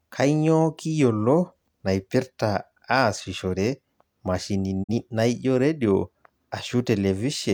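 A speech clip with a digital broadcast dropout from 4.82 to 4.92 s. The receiver lost valid data and muted, fading to silence over about 20 ms. The gap fits a single lost frame of about 43 ms. Sound resumes at "naijo redio".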